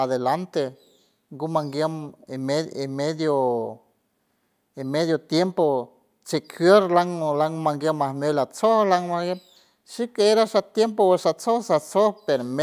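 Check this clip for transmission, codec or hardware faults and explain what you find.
Listening through the speech, I hear no transmission, codec or hardware fault anywhere in the signal.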